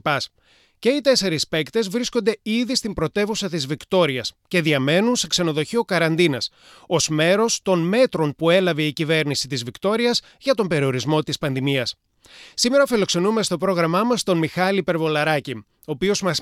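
Listening closely from the opening moment to the final one, nothing in the audio stood out as a technical problem.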